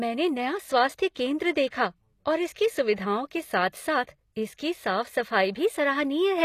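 Across the whole speech clip, the treble has a synthetic sheen. Sibilants sound gritty and metallic, with nothing above about 14.9 kHz. The damage is plainly audible. The likely cause is HE-AAC compression at a low bitrate, which fits roughly 24 kbps. The codec keeps only the lower spectrum. It rebuilds the top by copying lower bands upward under a coarse envelope. The copied harmonics don't match the real ones, so s sounds turn lispy.

At 1.14 s, a short hiss leads into a sharp onset. This is pre-echo. The codec spread quantisation noise across a whole block, and that noise leaked into the quiet just before the attack. It happens again from 1.67 to 1.72 s, spread over about 47 ms, so the smear is longer. The third instance runs from 2.53 to 2.56 s, just before "सुविधाओं के". Each attack sounds softened, with a brief wash ahead of it.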